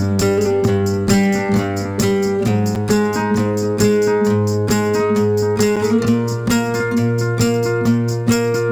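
Two brief, hard-edged holes break the sound at 2.75 s and 5.76 s, each about 7 ms of silence. This is a gap between chunks: the audio was delivered in 3-second pieces, and a small stretch of silence was left at each join, so nothing is lost but the flow stops abruptly.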